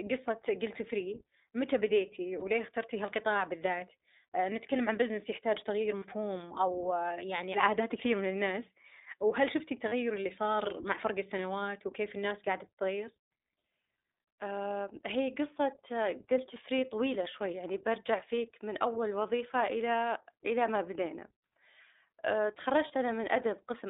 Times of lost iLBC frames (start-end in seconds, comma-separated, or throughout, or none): 2.40-2.44, 5.98-6.04, 9.88-9.93, 18.36, 22.88-22.91